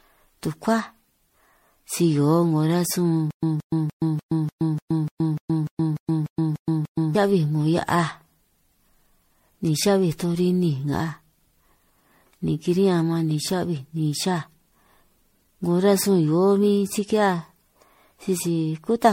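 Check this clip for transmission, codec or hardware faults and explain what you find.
Two faults are audible: a degraded, hollow character across the whole clip, and a stuttering stretch near the start.

Generation loss runs throughout. The speech sounds swirly, smeared and hollow, with blurred consonant attacks, which fits roughly ten passes through MP3 at around 64 kbit/s, each requantising on a shifted frame grid. A spectrogram shows a hard ceiling near 16.5 kHz and patchy, holed upper bands.

Stutter with silent gaps occurs from 3.31 to 7.15 s. A 175 ms burst repeats 13 times, each followed by 120 ms of digital silence, giving a steady 296 ms cycle. This is likely a stalled stream replaying its last fragment. The waveform shows identical blocks separated by flat lines.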